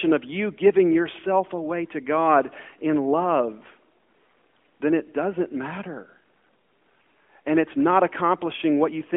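No technical faults can be heard in this recording.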